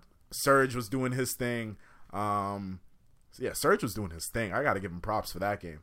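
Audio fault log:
1.29 s and 4.37 s, dropped samples. Two sharp single clicks, the first just after "was doing", the second between "was doing his" and "I gotta". Each likely comes from a fraction of a millisecond of missing samples, making the waveform jump abruptly.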